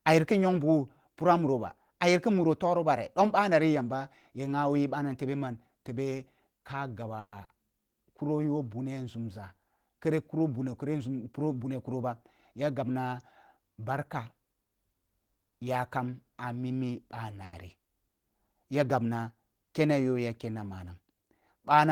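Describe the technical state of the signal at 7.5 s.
Around 7.5 s the speech goes briefly smeared, a short wobble lasting from about 7.44 to 7.50 s, where the sound seems to stretch rather than move on, and a quick consonant could drop out. This is short concealed packet loss: about 40 ms of audio failed to arrive in time, and the receiver bridged the gap by extending what it had just played, following its pitch where voiced or using shaped noise where not, before blending back into the real signal.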